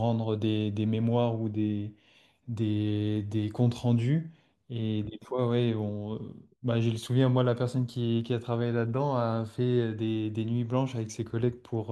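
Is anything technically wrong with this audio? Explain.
No, nothing technically wrong stands out here; the speech comes across without any audible problems at all.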